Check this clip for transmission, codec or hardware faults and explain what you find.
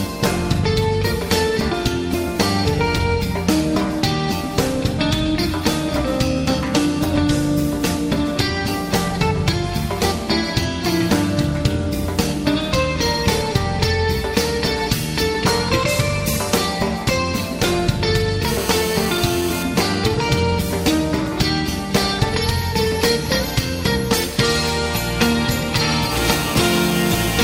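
GSM phone buzz appears at 18.48–19.63 s and 26.12–27.39 s, about 10 dB below the signal. A nearby 2G phone's call bursts at 217 Hz are rectified into a steady, raspy, harmonic-rich buzz, harsher than smooth 50/60 Hz mains hum.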